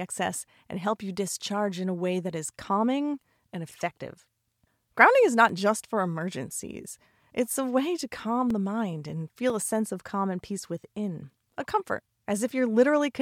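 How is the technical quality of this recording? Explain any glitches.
The recording has periodic USB or driver dropouts. From 2.49 s to about 9.5 s, a blocked audio path loses a couple of milliseconds to silence once per second, causing regular ticks during the speech.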